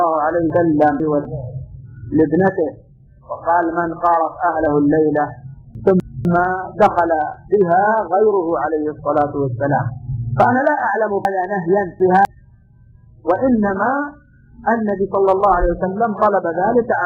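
From 0.5 to 1.25 s, chunks play out of order. A 250 ms block arrives two blocks late and plays after the audio that should follow it. The passage sounds jumbled, with hard joins. At 5.75 to 6.25 s, one block plays a single position late, a brief swap. From 11.25 to 12.25 s, a block lands three positions late. This is the longest scramble. Nothing is missing, only misordered.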